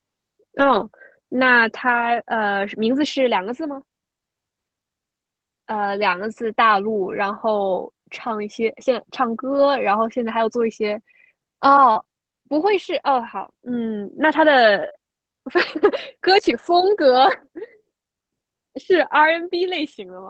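Between 0.59 and 0.85 s, and again from 1.89 to 2.15 s, a lost packet is rebuilt from error correction. The decoder plays a coarse low-bitrate backup copy, so there is no dropout, but each passage sounds grainier and noisier. On a spectrogram these stretches show smeared, less defined harmonics.

From 9.53 to 16.68 s, scattered short gaps appear: about four brief packet losses, the longest around 40 ms. Each is patched by extending the preceding sound, causing small ticks or hiccups. The waveform shows brief repeated or flattened cycles, and the spectrogram shows thin vertical smears over an Opus band that tops out near 8 kHz.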